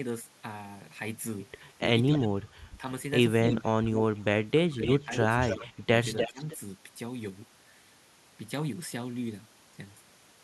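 From 1.8 to 2.81 s the speech suppressed in double talk dips by up to about 20 dB in pieces totalling roughly half a second, likely because the echo canceller, hearing both sides at once, turned everything down. The waveform shows sudden envelope holes. Inside that span, at 2.13 to 2.28 s, an echo leak returns a faint copy about 287 ms late at about 15 dB below the speech. More leaks follow at 3.43 to 3.98 s (289 ms, about 10 dB down) and 4.83 to 6.58 s (292 ms, about 5 dB down). They are likely residual loudspeaker pickup the canceller missed, and they appear on the spectrogram as time-shifted duplicates of the speech's harmonic patterns. Between 3.57 and 6.41 s, suppression again cuts roughly a second of speech by up to about 20 dB.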